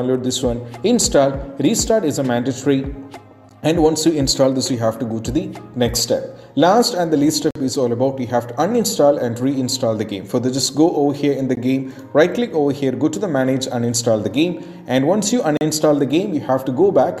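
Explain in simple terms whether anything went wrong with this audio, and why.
Four short, hard-edged silences interrupt the sound at 3.49 s, 7.51 to 7.56 s, 11.55 s and 15.57 to 15.61 s. These are gaps between stream segments: the audio arrives in 4-second chunks whose timestamps don't quite meet, so the player fills each hole with silence. No sound is lost.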